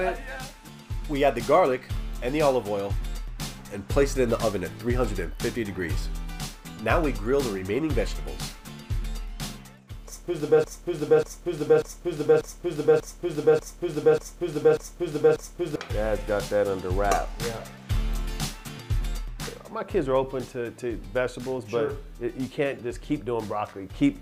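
At 10.64 s the audio locks into a broken-record loop: a 0.59 s fragment repeats nine times back to back until 15.76 s. It's likely a stalled player or stream resending its last buffered piece, so whatever should have played there is gone.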